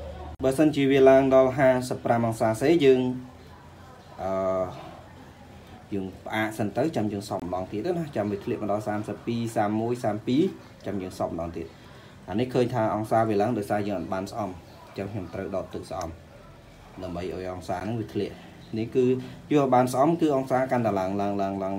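Blocks of digital silence occur at 0.35 to 0.40 s (46 ms), 7.40 to 7.42 s (23 ms) and 17.80 s (12 ms). The output buffer was likely not filled in time, so the audio drops abruptly to silence and back. The shortest gap sounds like a tick.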